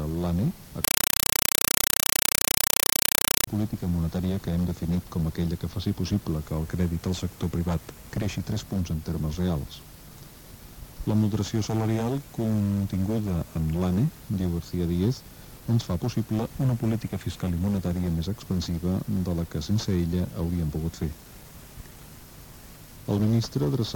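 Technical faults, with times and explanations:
0.84–3.47 s, compressed stream played as audio: the sound gives way to very loud, harsh static that chatters at about 31 pulses a second. A Dolby Digital (AC-3) bitstream, at a rate that fits 256 kbps, was passed over the digital link and treated as ordinary samples instead of being decoded. Each 32 ms frame becomes a 5.33 ms burst of noise-like data followed by zero padding, and that burst-then-gap cycle produces the rapid chatter.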